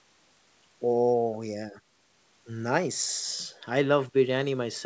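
No faults are audible; the speech has the ordinary wideband call sound, with the high-frequency content ending at 8 kHz as expected for a G.722 link at 64 kbps behind normal call microphone processing.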